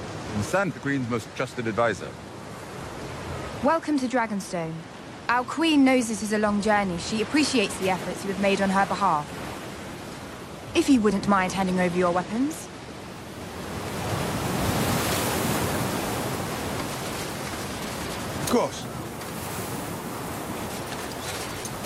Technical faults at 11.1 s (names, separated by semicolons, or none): none